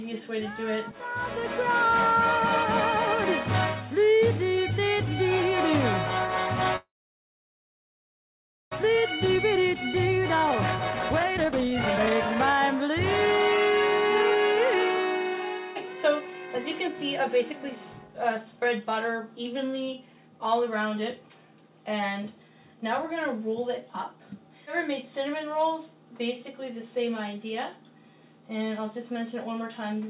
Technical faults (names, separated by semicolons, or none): call audio freeze; jitter buffer speed-up